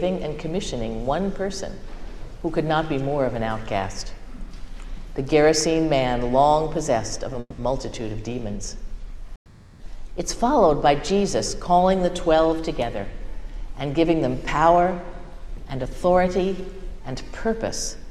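At 7.40 to 7.60 s, and again at 9.36 to 9.82 s, you get a call audio freeze. The last sound stretches into a fading buzz for 180 ms, then 440 ms, ending in 40 ms and 90 ms of silence. Held-up packets likely drained the jitter buffer. Playback then picks up where it stopped, so nothing's lost, it's just pushed later.

From 13.44 s to the end there's a jitter buffer speed-up. To shed that built-up delay, the receiver keeps snipping out tiny pitch-period slices, roughly a third of a second in total. Things run at 105% speed with the pitch unchanged, so it sounds a touch rushed.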